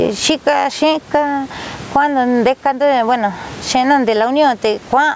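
A short speech clip with gain pumping all the way through, with a gain swing of around 20 dB. The likely cause is input gain set far too hot, with a fast limiter or compressor clamping each loud syllable, which squashes the dynamics. The room noise sits about 33 dB under the speech, and the call processing cuts everything above 8 kHz.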